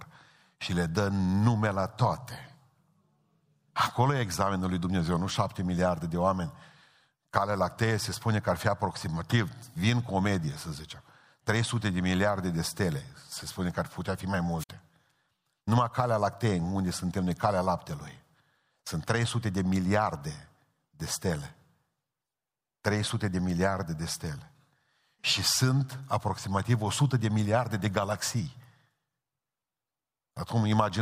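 At 14.58 s, just after "ar putea fi mai", the speech suffers a wireless microphone squelch dropout lasting until 14.69 s. The analogue FM link weakens until the receiver's squelch shuts the output, so a brief swell of hiss gives way to about 55 ms of near silence before the speech resumes. That rising static ahead of the gap separates it from a digital packet-loss dropout, which cuts abruptly with no noise building first.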